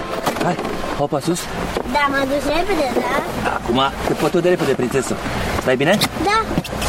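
No audible technical fault turns up anywhere in the audio, and the signal stays steady and continuous throughout.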